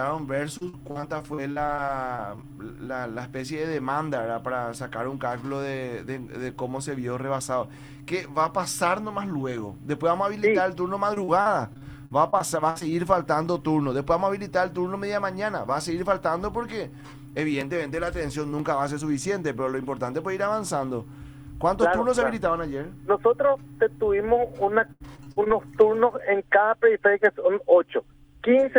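Repeated packet loss (robotic sound) hits at 0.57–2.53 s, 11.14–12.91 s and 24.87–25.52 s. Each hole is patched with stretched sound, leaving choppy stretches with pieces missing, worst in the last.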